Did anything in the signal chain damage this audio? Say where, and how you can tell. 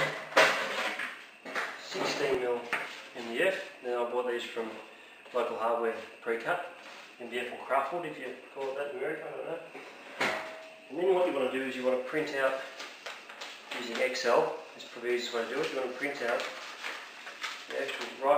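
Yes. Dropped buffer (overrun) at 2.35, 12.67 and 16.67 s: jumps where the sound skips ahead without silence, likely the driver losing a few milliseconds unread.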